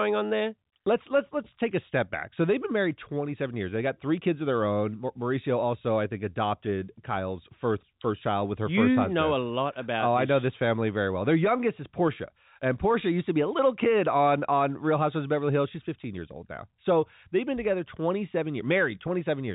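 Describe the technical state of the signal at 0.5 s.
At 0.5 s the signal is intact, with no fault present, only the narrow telephone band of G.711 coding, which carries nothing above about 3.8 kHz.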